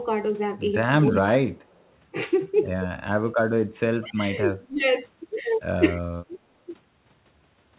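Speech suppressed in double talk hits this speech recording at 1.01 to 1.5 s, 4.01 to 4.2 s, 4.51 to 4.83 s and 6.28 to 6.35 s. The talker's level sinks by about 25 dB in the first two spots and about 15 dB in the last two, in short pieces of a few hundred milliseconds or less. The likely cause is an echo canceller that heard both ends talking at once and, unable to tell its own talker from loudspeaker echo, turned everything down. Echo leak appears at 1.12 to 1.18 s and again at 1.64 to 1.89 s as a faint delayed copy of the voice trailing by 219 ms. The first scrap sits about 25 dB under the speech and the second about 40 dB under. This is likely a far-end loudspeaker whose echo canceller left part of the microphone pickup in place and sent it back. The whole clip is narrowband with nothing above 4 kHz, which fits the G.711 mu-law call coding it passed through.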